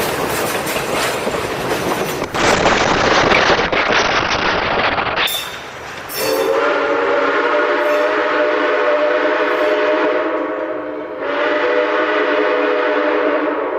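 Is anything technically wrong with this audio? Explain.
Yes, there's a call bitrate drop from about 2.24 s to 5.33 s. The connection's bandwidth estimate fell, so the encoder was told to use far fewer bits, and for roughly 3 s it codes much more coarsely. The top end also gets cut, with the bandwidth dropping from 20 kHz to about 6 kHz. You hear the sound go muffled and rough, which fits a fall from around 48 kbps to something near 8 kbps, before it recovers.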